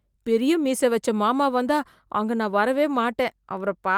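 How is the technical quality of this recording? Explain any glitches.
No technical glitches can be heard anywhere in the recording; the signal stays continuous and stable throughout.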